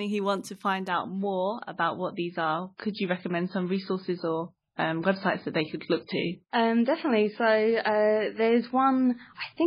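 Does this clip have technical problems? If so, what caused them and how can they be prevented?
Yes. From 0.89 s, just after "who want to find", the audio drops to a lower-bitrate version of an adaptive stream and stays there to the end. The switch is sudden, with no gap. Nothing above 5 kHz remains, and compression artefacts rise. This fits a fall from about 128 kbit/s MP3 to about 16 kbit/s. The player chose the cheaper stream because the connection slowed. To prevent it, use a steadier, faster connection or keep a larger playback buffer.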